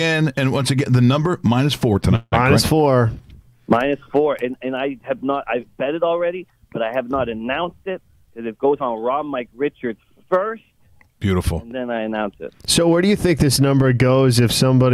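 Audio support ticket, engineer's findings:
Call audio freeze, 2.15–2.34 s: last sound stretched into a fading buzz for about 165 ms, final 40 ms silent, then audio resumes exactly where it stopped. Likely network-delayed packets draining the jitter buffer; receiver concealment filled the wait. Unlike packet loss, nothing is cut out. The gap is inserted, pushing playout about 165 ms later.

Jitter buffer speed-up, 8.08–9.51 s: audio runs hurried at about 111% speed with pitch unchanged. Receiver jitter buffer shedding excess delay by repeatedly dropping pitch-period-length slices, about 150 ms in total. Distinguishable from resampling or clock drift because pitch does not rise; only timing compresses.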